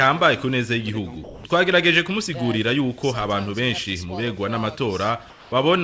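From 1.24 to 1.44 s and again from 5.30 to 5.52 s, the background gives way to comfort noise: a steady, featureless hiss, about 3 dB and then about 2 dB quieter. This is likely discontinuous transmission during pauses. Unlike a dropout, the gap is never silent.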